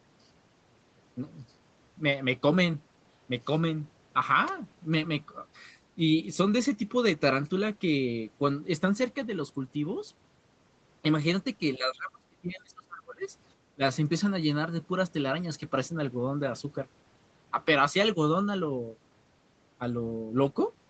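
An echo canceller that likely could not tell the near talker from loudspeaker echo during double talk is behind speech suppressed in double talk here. From 11.77 to 13.24 s the speech is pulled down hard, by around 30 dB at its deepest, for about one and a half seconds, so it sinks almost to nothing. A second, brief suppression from 13.75 to 13.82 s clips out a short piece of speech, heard against the call path's band, which stops at 8 kHz.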